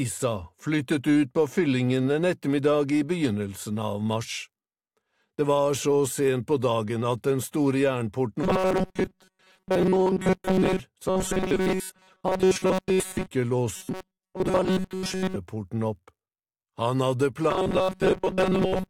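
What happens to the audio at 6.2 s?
Nothing goes wrong at 6.2 s; the audio plays straight through that moment intact, with no dropout, click or distortion.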